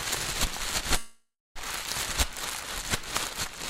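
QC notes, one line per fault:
0.97–1.58 s, call audio freeze: the sound stalls for about 0.6 s. The last fragment is carried on as a fading buzz that decays into near-silence, with the final 0.26 s silent. Playback then resumes where it stopped, with nothing skipped, so the remainder of the clip runs 0.58 s late. This is likely a jitter buffer running dry while packets were held up in transit, with the receiver concealing the wait until delivery resumed.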